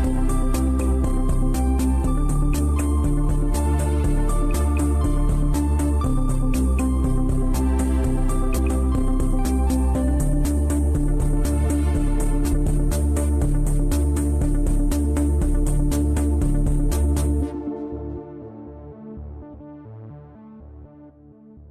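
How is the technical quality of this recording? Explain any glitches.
The recording has four short glitches from damaged data in a compressed stream, at 8.57–8.59 s, 12.52–12.54 s, 19.53–19.55 s and 21.09 s. Each is a quick chirp or blip of about 20 ms. Some bytes in the compressed data got corrupted, so the decoder couldn't read those frames properly and lost sync until it found the next clean frame header. That brief garbled decode is the glitch you hear.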